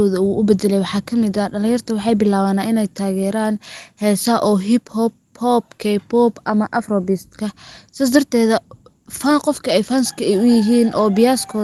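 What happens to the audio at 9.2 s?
At 9.2 s the speech carries on intact, with no dropout, click or other fault at that point.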